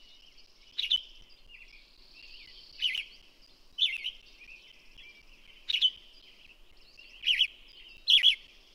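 From 0.21 s to 8.48 s, periodic USB or driver dropouts recur every 0.25 s, about thirty in all. At each one, something stalls the bus or driver and roughly 10 ms of audio is replaced by silence, producing an evenly spaced tick wherever signal is present.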